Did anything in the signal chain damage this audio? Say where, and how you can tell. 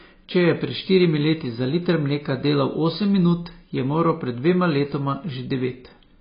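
Yes, at the codec stage, and it runs through the whole clip. The speech stops dead at 5 kHz and sounds dull and smeared, fizzy on sibilants. That's likely AAC compression. AAC-LC starved of bits, around 16 kbps by the sound, drops its cut-off and quantises what's left coarsely.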